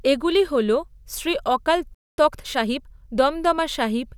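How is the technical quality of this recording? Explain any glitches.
Two linked playback glitches affect this speech recording, both just after "এগুলি হল শ্রী অকাল".

At 1.95 s a playback stall begins, likely because the player ran out of buffered data or its thread was blocked. Output halts mid-flow, leaving about 0.23 s of silence before the speech resumes at 2.18 s.

From 2.18 s to 3.1 s comes a time-compressed catch-up. To work off the backlog the stall built up, the player cuts and cross-fades short slices, running about 1.25 times fast. The speech sounds hurried at unchanged pitch.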